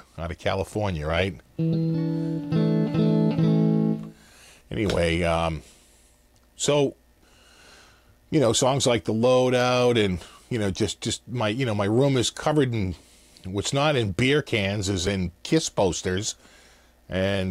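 At 15.07 s the sound jumps ahead abruptly, with no gap of silence between the two sides of the join. Roughly a few milliseconds of material are missing, and the waveform on either side is spliced directly, which produces the discontinuity. The likely cause is a dropped buffer (overrun): the capturing program fell behind, the hardware overwrote samples before they were collected, and that material was lost.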